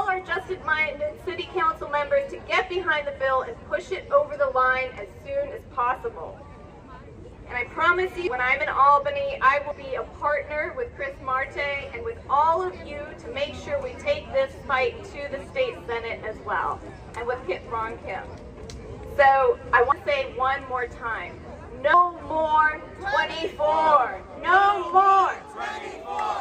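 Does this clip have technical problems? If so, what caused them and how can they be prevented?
Yes. Compressed frames are skipped at 8.27, 9.71, 19.92 and 21.94 s. At each point the audio jumps forward. About a fifth of a second is lost at 8.27 and 19.92 s, about a tenth at 9.71 s, and about 150 ms at 21.94 s. That fits runs of a few whole 32 ms frames that were missing or rejected as damaged. Prevention: check the file's integrity after transfer, and add error protection or retransmission on the delivery path.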